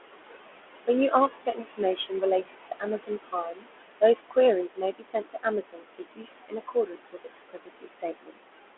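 Noise suppressor artifacts run through the whole speech clip: the suppressor pulls the room noise down by about 20 dB between phrases and lets it rise again under the speech, so the background pumps with the talker.

Speech cut by the noise suppressor occurs at 1.09–1.8 s, 1.96–2.23 s, 2.42–3.83 s, 4.68–6.3 s and 6.48–8.37 s. The suppressor mistakes quieter parts of the speech for noise and turns them down by about 15 to 21 dB. Soft consonants and word endings sound swallowed, in short patches at first and for much of the later stretches.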